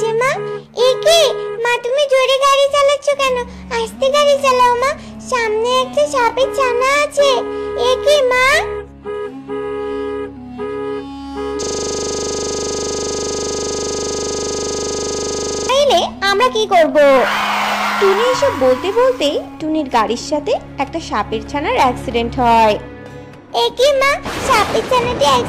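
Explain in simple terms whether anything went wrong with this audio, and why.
A system hang loop runs from 11.63 to 15.69 s. The computer froze and the sound hardware replayed one 40 ms scrap about a hundred times, making a steady 25 Hz buzz.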